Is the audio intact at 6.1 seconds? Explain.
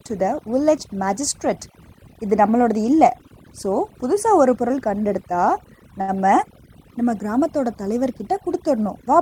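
No. A short stall from a late packet runs from 6.01 to 6.10 s. A packet arrived after it was due, the jitter buffer ran dry, and the receiver stretched the last sound for about 68 ms before resuming from the same point. No speech is lost, but a sound is held too long with a slight buzz or dip, and everything after it plays 68 ms late.

Overdone noise removal is also present at that moment, as it is across the whole clip. The suppressor pushes frequency bands near its noise estimate far down or off, taking quiet parts of the voice with them. That leaves a lowered background that breaks up into twinkling, warbling specks.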